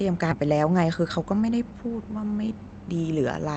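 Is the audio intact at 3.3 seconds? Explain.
Yes, at 3.3 seconds the speech is intact and plays through without any dropout, glitch or distortion.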